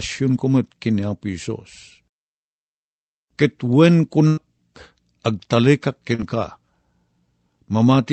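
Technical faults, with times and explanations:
4.27 to 4.39 s, burst of packet loss: about 100 ms went missing; the receiver held and faded the last sound, then speech resumed further on.
6.15 to 6.21 s, short concealed packet loss: roughly 40 ms never arrived in time, so the decoder extended the preceding sound and blended back, leaving a brief smear.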